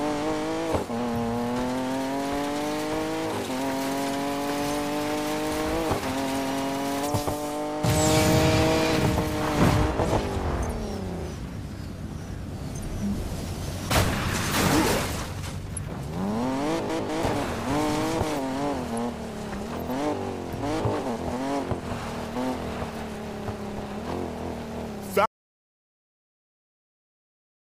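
At 25.26 s the audio cuts off abruptly in mid-flow and never returns. The last 2.5 seconds or so, through to the end, are dead silence with no room tone or noise floor at all. That is an audio dropout to silence. It is likely caused by the input being lost, through a disconnected device, a failed link or an accidental mute, while the recorder kept writing silence. Whatever sound followed that point is simply missing.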